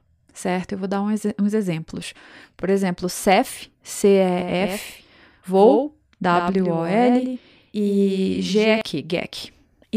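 Speech, and from 4.39 s to 8.81 s there's a doubled audio track: a second full-band copy trails around a tenth of a second behind, roughly 5 dB quieter, switching in and out abruptly with no room tail. Likely a slower capture path mixed in.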